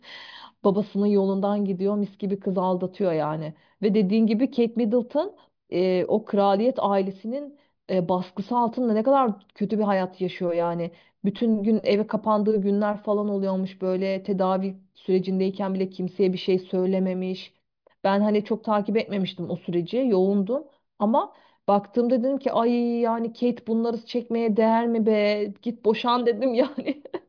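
Speech recording; no technical faults can be heard.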